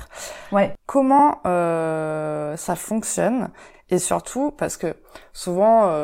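A brief stutter at 1.19 to 1.24 s, just before "euh ça fonctionne et", returns at 3.74 to 3.79 s, between "euh ça fonctionne" and "et surtout parce que". These are overlapping chunks: each 2.5 s block starts early, so 50 ms replays at every join.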